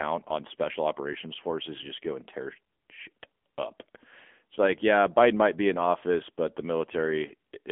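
A speech clip carrying AMR narrowband mobile codec damage throughout, plainly audible: band-limited to about 250 Hz to 3.4 kHz with nothing above 3.5 kHz, plus the buzzy, synthetic edge of pulse-driven vocal tract coding, which fits AMR-NB at around 7.95 kbps rather than a simple telephone filter.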